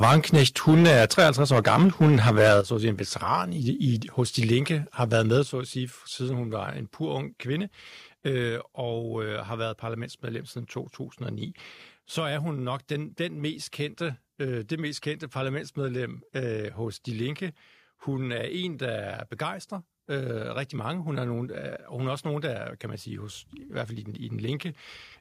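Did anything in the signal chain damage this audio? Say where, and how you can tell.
Yes. Microphone overload is audible from 0.02 to 2.6 s, with peaks about 10 dB over and roughly a tenth of samples flattened, and again from 5.01 to 5.36 s, about 2 dB over with only a small fraction clipped. The likely cause is input gain driving the converter past full scale. It differs from codec distortion because the harsh crackle rides only on the loudest syllables.

The microphone volume is stepped down at 0.05 s (about 2 dB), at 2.61 s (about 7 dB) just before "så at sige en", and at 5.43 s (about 6 dB) just before "så at sige siden". Call processing likely lowered the device input after detecting clipping. These are single instant steps, and background and speech drop together, unlike a gradual AGC fade.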